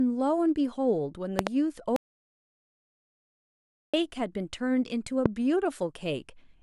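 A speech clip with two loud pops: a quick double pop between 1.39 and 1.49 s and a single one at 5.26 to 5.28 s, each roughly 20 dB above the speech. These are likely voltage spikes from a plug, switch or static, heard as sharp thumps over speech that carries on underneath rather than as clipping distortion. There is also an audio dropout to silence from 1.96 to 3.94 s, nearly two seconds of silence with no room tone, unlike a noise gate's residual hiss, likely from a lost input connection.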